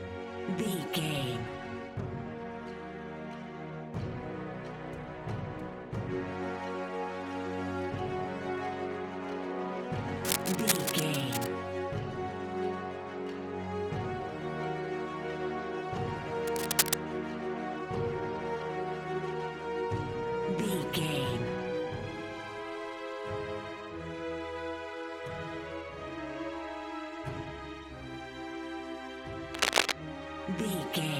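Cable scratch noise at 10.2–11.5 s, 16.5–16.9 s and 29.5–29.9 s: dense, uneven rustling, likely from a worn connector being moved. It lasts longer than isolated clicks and reaches about the level of the sound or slightly above.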